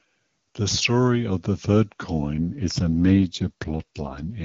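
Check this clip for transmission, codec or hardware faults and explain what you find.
There's one fault here, an AMR rate drop near the end. Right after "story of the third", from 2.34 s to 4.43 s, the speech turns rougher and more synthetic. The band stays the same and nothing cuts out. That points to the network pushing the AMR wideband codec down to a lower rate, something like 23.85 kbit/s falling to 8.85 kbit/s, and spending the freed bits on error protection over a weak radio link. Fewer bits go to the speech itself, so its texture coarsens for the rest of the clip.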